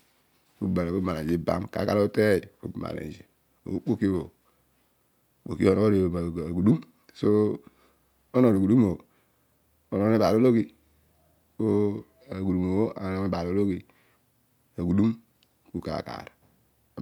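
Nothing technical goes wrong anywhere in this bit of speech; it just runs along without a hitch.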